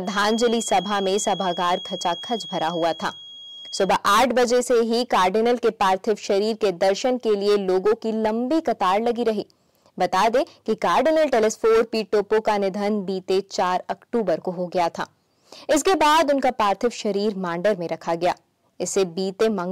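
From 0.0 to 3.94 s a feedback whistle sits near 3.3 kHz, roughly 15 dB under the sound, likely a speaker-to-microphone loop held just short of runaway.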